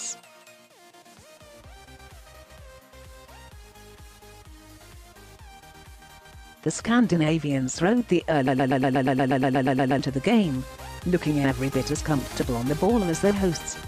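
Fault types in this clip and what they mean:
Broken-record loop: from 8.47 to 9.99 s one 120 ms fragment repeats exactly, 13 times back to back, replacing the sound due there, likely from a stalled player or stream. The waveform shows identical tiled blocks; the spectrogram, a regular stripe pattern every 120 ms.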